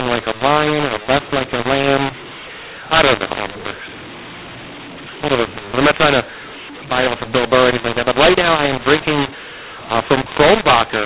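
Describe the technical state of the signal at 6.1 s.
At 6.1 s the speech carries a mu-law and A-law mix-up, present across the whole clip: G.711 mu-law samples are being decoded with the A-law curve, so levels come out scrambled, the quietest samples are lifted well above silence, and the voice sounds harsh and distorted, with pauses filled by noise.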